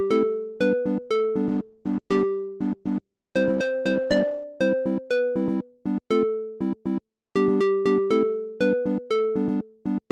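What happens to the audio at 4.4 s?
At 4.4 s the audio is near the end of a call bitrate drop lasting from 1.49 s to 4.51 s. The encoder, starved of bits by a falling bandwidth estimate, codes coarsely, which fits a fall from 32 kbps to 13 kbps. The sound is rough and muffled, with its high frequencies cut.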